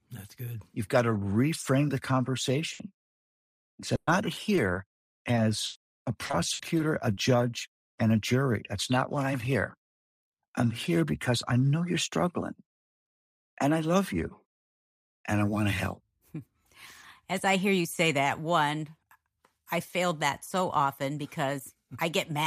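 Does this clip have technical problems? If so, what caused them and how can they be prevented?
Yes. A burst of packet loss at 2.73 to 2.81 s (about 60 ms) and 3.95 to 4.09 s (about 120 ms) makes the receiver stretch the last sound into a held buzz or fading hiss before skipping ahead. On a spectrogram it shows as smeared, frozen harmonics, then an abrupt jump. A jitter buffer and redundancy such as FEC prevent this.

A short concealed packet loss at 3.69 to 3.73 s patches a 20 ms hole by extrapolating the preceding sound. It is heard as a brief smear or wobble. The waveform shows a tiny repeated-looking cycle where the real signal should change. Stable network conditions and in-band FEC prevent it.

Repeated packet loss (robotic sound) runs from 4.55 to 7.19 s. Twelve gaps, the longest 100 ms, leave about 17% of that stretch synthesised, which sounds choppy. A spectrogram shows periodic blurred bands breaking up the harmonic structure. 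Better network quality of service and adaptive bitrate reduce it.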